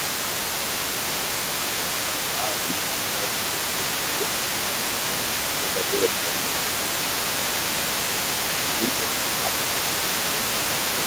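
From the start to the end, at 0.00 to 11.07 s, the other side's voice is leaking through. A second voice runs under the talker, only slightly quieter. It likely comes from the loudspeaker, and the echo canceller did not fully remove it from the microphone.

Speech is suppressed in double talk at 0.00 to 0.38 s, 0.87 to 3.42 s, 3.76 to 6.64 s and 8.50 to 11.07 s. The talker dips by about 5 dB in patches, for over a second in each of the middle stretches. The likely cause is the canceller confusing the two voices and turning down both. The room noise stays far below the speech.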